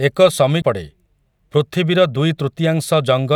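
At 0.62 s the player's laser jumped off its track and landed on a different turn of the disc's spiral, a CD skip. The player drops out for roughly ten milliseconds while it relocks, then resumes reading from the new position instead of where it left off. The speech gives a small tick at that instant, followed by an abrupt splice where playback jumps to another part of the recording.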